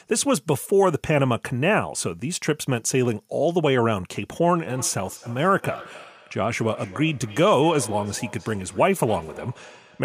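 From 4.55 s to 10.04 s, feedback echo between two devices. Another device replays the speech into the microphone. Repeats return roughly every third of a second, about 19 dB down.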